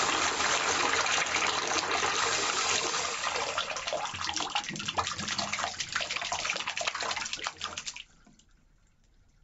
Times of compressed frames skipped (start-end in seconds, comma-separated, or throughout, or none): none